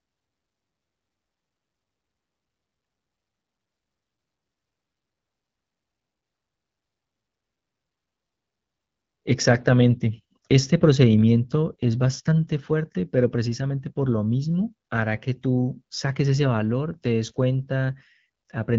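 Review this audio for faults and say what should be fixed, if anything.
No faults found; nothing here needs fixing.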